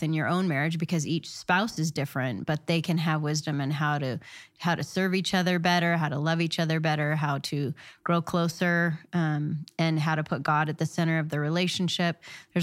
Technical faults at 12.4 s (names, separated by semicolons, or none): none